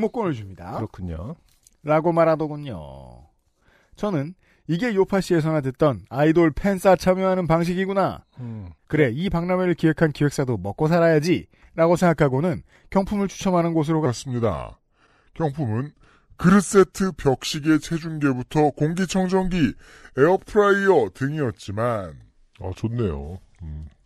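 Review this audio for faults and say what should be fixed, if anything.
From 14.06 s to the end, the speech plays at 0.82 times speed. This section at the wrong speed sounds about three semitones deeper and slower together, unlike a pitch shift that keeps timing. It likely comes from playback on a mismatched clock. Prevent this by confirming that every segment's sample rate matches the session clock before editing or export.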